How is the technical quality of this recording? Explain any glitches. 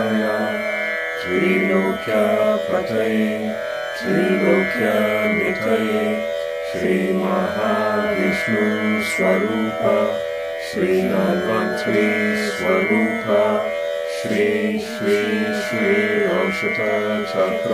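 No glitches turn up anywhere in this recording, so there is nothing to explain.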